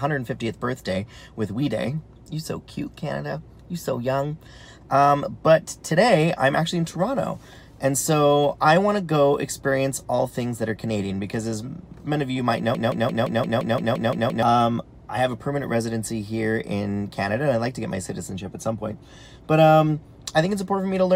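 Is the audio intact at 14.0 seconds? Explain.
No. From 12.75 to 14.43 s a broken-record loop runs: one 0.17 s fragment repeats exactly, back to back, ten times, likely from a stalled player resending its last chunk. Unlike an echo, the repeats never fade, and the audio that should play there is lost.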